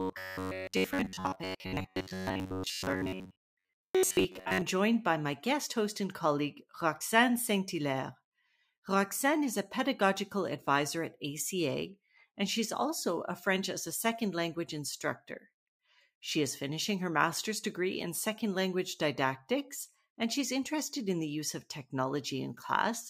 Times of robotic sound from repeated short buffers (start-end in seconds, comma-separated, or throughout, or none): 0.01-4.62